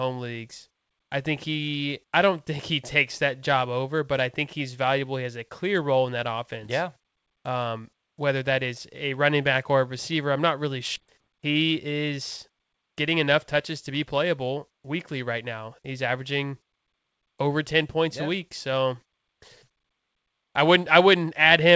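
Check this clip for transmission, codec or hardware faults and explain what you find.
Two transmission faults are audible, both around the eleven-second mark, on speech carried over a call path whose band ends at 8 kHz, consistent with G.722.

At 10.96 s, just after "receiver I'm not really", there is a skip ahead: about a second of audio was discarded while later packets were queued, so playback jumps forward with no gap.

From 11.05 to 11.94 s, jitter buffer speed-up plays the speech at about 108% by trimming pitch-period segments, around 70 ms in total. It sounds slightly hurried at unchanged pitch.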